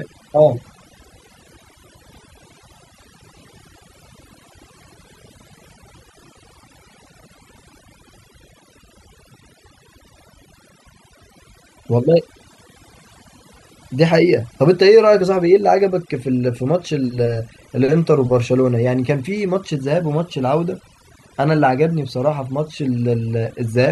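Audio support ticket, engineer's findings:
Overdone noise removal, whole clip. Background drops and breaks up, with twinkling specks between phrases. Probable component: noise reduction stage, set too aggressive. Bands near its noise estimate get cut hard or gated off, taking quiet speech detail with them.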